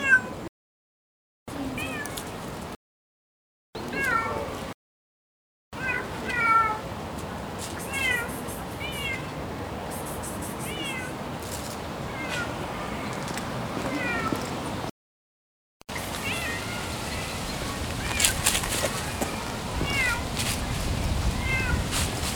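Compressed frames skipped at 4.51 s, 6.29 s and 12.09 s: the decoder dropped whole frames, about one at 4.51 s and two at the others. That is roughly 30 ms and 50 ms of audio, consistent with 26.1 ms frames. Because the surrounding frames overlap, each jump sounds like a brief smeared blip, not a sharp click.

GSM signalling bursts from 15.82 s to 17.79 s: a nearby 2G phone was signalling, and the audio circuitry rectified its radio bursts. This is heard as a galloping dit-dit-dit of short 217 Hz buzzes, about 10 dB below the wanted sound.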